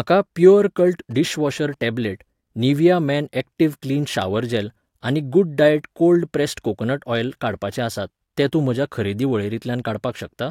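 Speech with a galloping dit-dit-dit of short 217 Hz buzzes from 0.79 to 1.83 s, well below the speech level: GSM signalling bursts from a nearby 2G phone, rectified by the audio circuit.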